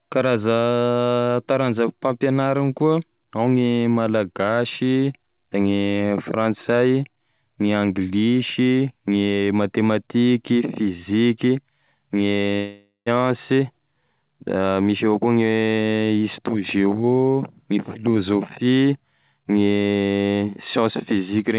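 From 12.56 to 13.08 s the speech gives way to a buzzy continuation of the last sound that fades over about half a second, then drops to near-silence for about 140 ms before speech resumes with roughly 400 ms of it gone. This is a long network dropout, likely packets that never arrived, concealed by the receiver extending the last sound. The waveform shows a decaying envelope into a flat gap. The spectrogram shows smeared harmonics fading to blank, with nothing above 4 kHz, as throughout this narrowband call audio.

Right after, from 13.16 to 14.23 s, a jitter buffer speed-up follows. The receiver is working off the extra delay, about a tenth of a second, built up around the dropout. It does this by cutting out short pitch-period pieces again and again, so the speech runs at 109% speed with unchanged pitch and sounds slightly hurried. In the spectrogram, harmonic lines keep their spacing but syllables look compressed in time. 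The waveform shows closely spaced splice points where cycles were dropped.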